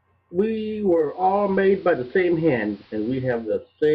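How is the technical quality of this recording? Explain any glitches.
There's one clear glitch: a stretch where the speech drops from the clean digital feed to the station's AM signal and then back. It's digital radio blending to analogue, running from about 0.90 s to 3.65 s. The receiver lost its digital lock and cross-faded, over roughly 0.45 s each way, to the AM version of the same broadcast. AM carries less treble, so the speech goes duller, the level shifts by about 2 dB, and a low hiss sits well under the speech until the digital feed returns.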